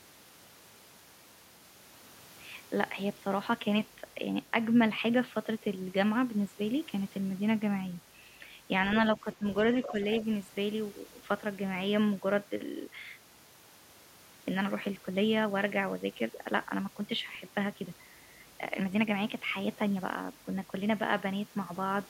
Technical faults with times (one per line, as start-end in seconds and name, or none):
9.17-9.45 speech suppressed in double talk
9.83-9.91 other side's voice leaking through
9.91-9.97 speech suppressed in double talk
17.35 underrun with held sample